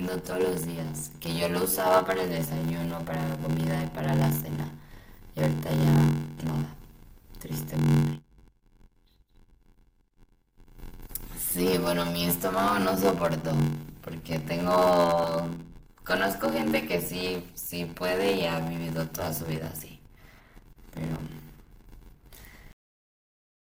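Throughout the clip, a block size mismatch (padded) means one stage writes shorter blocks than the next stage reads, which fits a 512-sample read block, with zeros filling each remainder. The speech carries an 86.1 Hz buzz and runs slow, at 0.861 of normal speed, while keeping its timbre.

From 22.72 s to the end at 23.73 s, truncation distortion on a fade appears: the fade-out stage drops bits without dither, sounding like only 7 bits remain. From about 22.71 s the quiet tail of the fade turns gritty.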